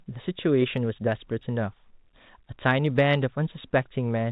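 Nothing goes wrong anywhere in this stretch of speech; it simply has the narrow telephone sound of G.711 coding, with nothing getting through above 4 kHz.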